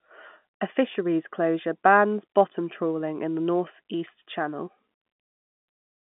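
De-emphasis applied wrongly affects the speech from 0 to 3.39 s. A treble-cutting filter, meant to reverse a pre-emphasis boost the signal never had, has tilted the response smoothly downward toward the highs, about 10 dB down at 10 kHz relative to 1 kHz. Even within the narrow telephone band of the G.711 line, which carries nothing above 3.8 kHz, that slope leaves the voice dull and muffled until the filter drops out.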